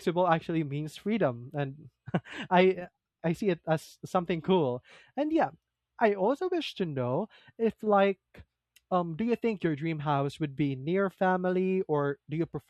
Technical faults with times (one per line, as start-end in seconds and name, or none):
none